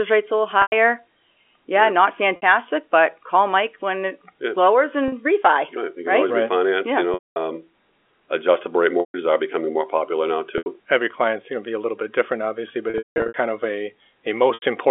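Packet loss with pitch repetition strikes at 0.62, 2.36, 5.08 (after "when it yeah lowers"), 7.14, 9.0, 10.58, 12.9 and 14.54 s. The receiver repeats the last pitch period. Gaps of 40 to 80 ms sound like a briefly held, buzzy tone. The 220 ms loss and the scattered losses running to 13.34 s after "little bit different obviously" fade into silence before the speech cross-fades back.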